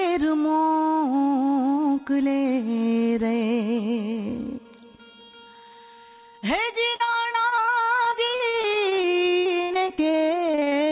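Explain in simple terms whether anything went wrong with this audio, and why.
From about 6.96 s to 10.15 s, and again from 10.51 to 10.76 s, there's repeated packet loss (robotic sound). Dozens of tiny dropouts, the longest around 73 ms, get papered over by stretching the previous sound, which leaves it choppy and mechanical. The call path's narrow, sub-4 kHz sound sits underneath.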